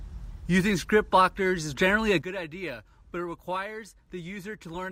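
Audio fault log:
2.22 to 4.92 s, sudden gain jump: a gain setting, likely applied instantly without a ramp, drops the speech and background noise together by about 12 dB through the end.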